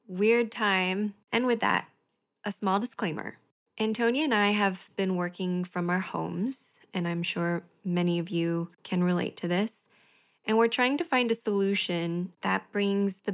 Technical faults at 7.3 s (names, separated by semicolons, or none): none